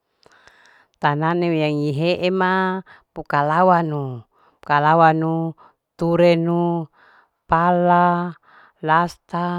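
Nothing stood out on listening to this speech recording.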